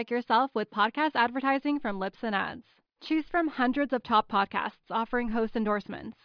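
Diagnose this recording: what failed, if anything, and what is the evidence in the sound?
Nothing failed at any stage of this speech recording.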